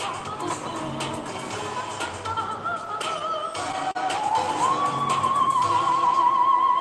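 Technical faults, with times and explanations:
2.85 to 3.97 s, repeated stalls (stutter): the buffer ran dry seven times, each gap under 40 ms patched by stretching the last sound, so it drags and hiccups without losing anything.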